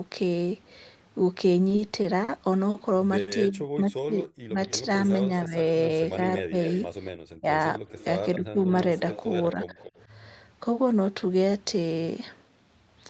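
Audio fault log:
1.69–2.30 s, repeated stalls (stutter): The sound catches four times. Packets arrived late, so the receiver held the last sound, about 90 ms in all, the longest gap 40 ms.
2.70–2.76 s and 3.20–3.29 s, short stall from a late packet: Each time a sound is held too long. A late packet forced the receiver to stretch it, by 40 ms and then 70 ms. Nothing is lost.
3.49–8.59 s, speech suppressed in double talk: The talker dips in pieces, about 1.5 s in all, at worst by roughly 35 dB. Likely the echo canceller turned both sides down while they overlapped.
4.00–4.45 s, jitter buffer slow-down: Speech drags at 91% speed, same pitch. The receiver repeated single pitch periods, adding 48 ms to rebuild its reserve.
6.38–10.05 s, echo leak: A faint copy of the voice trails 254 ms behind, roughly 15 dB down. Likely a loudspeaker echo the far end's canceller missed.
6.54–7.17 s, jitter buffer speed-up: Speech sounds hurried at 109% speed, pitch unchanged. 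The receiver cut short pitch-period pieces, about 70 ms, to shrink excess delay.
9.54–9.76 s, speech suppressed in double talk: The talker dips again, briefly, by about 10 dB. Likely the echo canceller ducked the voice while both sides spoke.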